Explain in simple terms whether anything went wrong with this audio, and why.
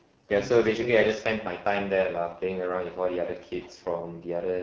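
Yes, something went wrong, and it affects the whole clip from start to finish. The speech has been squeezed through the AMR wideband (HD Voice) codec at its lowest quality setting. This codec rebuilds speech from a simple model of how a voice is produced, and at this setting it has too little data to do that well, so the speech comes out rough and raspy. The highest part of the sound is noise filled in to imitate what was there.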